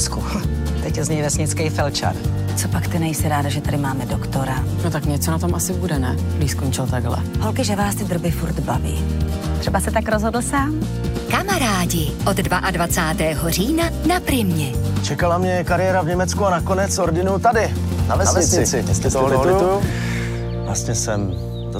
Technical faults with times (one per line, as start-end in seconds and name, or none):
17.92-19.92 doubled audio track